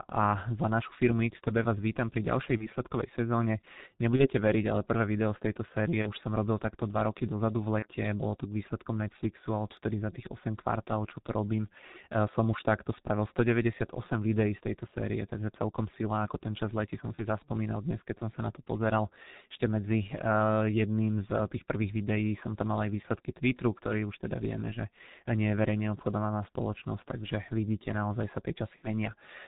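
Throughout, the speech has passed through the G.723.1 codec at about 6.3 kbit/s. It codes the voice in 30 ms frames and refreshes its model of the vocal tract slowly, so fine detail is heavily lost. Nothing above 4 kHz survives. The voice comes across muffled and hoarse, and consonants smear into one another instead of landing crisply.

VoIP packet loss concealed by the speech codec interrupts this at 2.57, 4.17, 6.02, 7.79, 17.15 and 28.76 s. Each time, packets went missing and the decoder filled the gap by repeating its last pitch and filter settings, turning the gain down frame by frame. The first five gaps fit a single 30 ms frame, and the last, ending near 28.88 s, fits two. The sound briefly stretches into a buzzy tone or a coloured noise that fades, and the voice stays weak or distorted for tens of milliseconds or more before it recovers.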